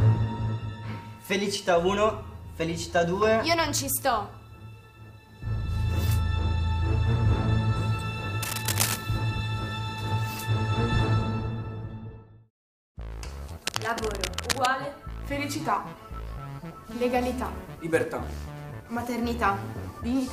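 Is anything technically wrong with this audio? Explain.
Yes. Cable scratch noise occurs at 8.43–8.97 s, roughly as loud as the sound, and 13.67–14.68 s, somewhat quieter: likely a worn connector shifting, shown as ragged broadband smears and jagged waveform spikes.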